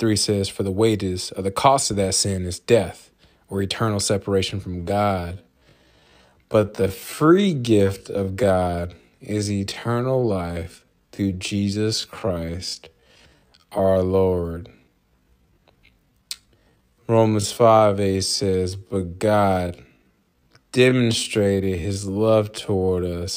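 From 4.67 s to the end, this speech recording suddenly drags: the pace drops to about 0.61 times normal speed while the pitch stays where it was. This is a time-stretched section, likely produced by software lengthening the audio to fill a set duration, keeping pitch constant by repeating short overlapping slices.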